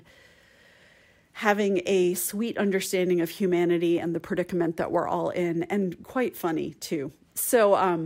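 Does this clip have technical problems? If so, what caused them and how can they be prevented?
Yes, there's one: a block of digital silence at about 3.98 s, right after "sweet understanding of humanity" and before "and the predicament that". The signal drops straight to silence for about 0.67 ms and jumps back with no fade, which fits a 32-sample block. At that length you don't hear a hole, just a tick or dip. Either the output buffer wasn't filled in time or a calculation produced invalid values for that block. To prevent it, give the audio path more buffer headroom and guard the processing against invalid results so no block reaches the output empty.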